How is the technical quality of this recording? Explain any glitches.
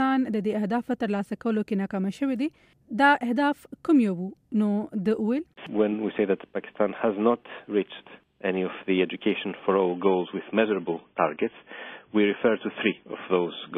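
The recording has one clear glitch near the end. From 9.9 s to the end, an adaptive stream at a lower bitrate takes over. A slower connection forced a cheaper version, likely dropping from 128 kbit/s to 16 kbit/s MP3. Nothing remains above 3.8 kHz. The sound turns dull and artefact-laden, with no gap.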